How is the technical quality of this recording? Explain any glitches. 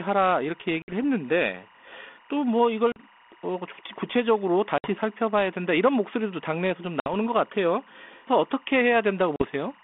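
The recording has two faults: a constant chirping tone underneath the speech and five brief dropouts in the line.

Timecode bleed runs through the whole clip. Linear timecode from a nearby track or cable has leaked into the audio. The code is a square wave that flips between two pitches, near 1 kHz and 2 kHz. It sits well below the speech, around 30 dB down. It is heard as a steady, warbling chirp. Its rhythm fits 24-frame timecode.

Packet loss on an ADPCM call causes five hard-edged holes. They start at 0.82, 2.92, 4.78, 7.0 and 9.36 s. Three gaps last 60 ms and two last 40 ms, which fits two or three packets lost each time. Each lost stretch was replaced by silence. The receiving decoder's prediction and step size then drift out of step with the sender's. So the speech returns with brief distortion. It settles within tens of milliseconds. The G.726 line itself runs at 32 kbit/s, with audio limited to roughly 200 to 3500 Hz.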